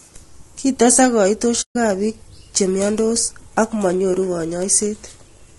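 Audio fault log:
throughout: low-delay AAC compression. A short-frame low-delay coder, likely AAC-ELD at a rate that fits about 32 kbps, cannot resolve the voice's pitch harmonics finely. The speech sounds plainly rough and grainy, with noise filling the gaps between harmonics and a thin, artificial top band.
1.61–1.76 s: AAC frame loss with muting. A run of coded frames went missing, consistent with roughly seven in a row, and the decoder replaced their spectrum with silence. The speech drops out for about 140 ms, fading out and back in across the overlapping windows.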